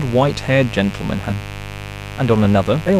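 A speech clip with a steady, raspy mains buzz running under it from start to finish. The buzz is built on 50 Hz and sits roughly 15 dB below the speech. Its harsh edge comes from sharp switching spikes, twice per mains cycle. Those spikes spread harmonics well up into the kilohertz range. A dimmer, a rectifier or a missing shield can let such spikes into the signal path. There are two bursts of damaged data in a compressed stream. The first runs from 1.26 to 1.32 s. The second runs from 2.84 to 2.89 s. Each is a short chirp or squawk. Corrupt bytes in the encoded stream make the decoder misread those frames. It loses sync and hunts for the next valid frame header. At 2.44 to 2.46 s come chunks out of order. A 10 ms chunk plays one chunk late, after the audio that should follow it. No audio goes missing, but the sequence is scrambled. The result is a brief jumbled moment. The reordering leaves three hard joins.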